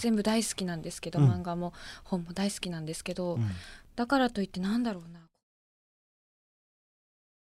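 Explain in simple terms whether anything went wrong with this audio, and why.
Nothing went wrong with this recording: the gentle smooth fade that starts around four and a half seconds and finishes at 5.44 s is an ordinary editing touch, not a problem.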